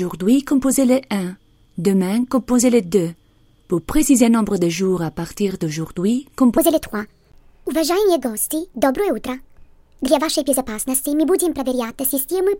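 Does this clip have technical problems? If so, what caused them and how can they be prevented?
Yes. From 6.58 s to the end at 12.60 s there's a section at the wrong speed: playback jumps to 1.35 times the original rate, so everything sounds hurried and sits roughly five semitones higher, with pitch and tempo shifting together. The likely cause is that stretch being played or rendered against the wrong clock, so it runs faster than it was captured. To prevent it, make sure every segment is conformed to the same clock before export.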